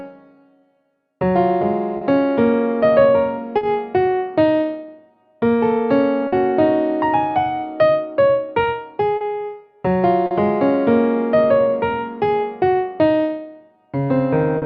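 The whole clip carries clock drift between sender and receiver: the sender's clock runs a few percent slow, so the receiver's jitter buffer keeps draining. You hear small timing hiccups scattered unevenly from start to finish.

From 0.02 to 8.67 s come repeated timing corrections. The receiver stretches the audio to about 98% speed, repeating short pieces to stay in step and adding around a fifth of a second overall. It comes across as a slightly unsteady, dragging tempo.

Short stalls from a late packet land at 1.97 to 2.03, 3.57 to 3.63, 6.27 to 6.34, 9.17 to 9.23, 10.27 to 10.33 and 14.58 to 14.64 s. Each time the buffer ran dry, so the last sound was held for 40 ms (50 ms at 6.27 s) until the packet showed up. Nothing goes missing, just a brief hold with a faint buzz or dip.

Between 11.35 and 14.06 s the timing corrections return, this time pulling the sound to about 96% speed and adding roughly a tenth of a second. 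The tempo wobbles again in the same slowed-down direction.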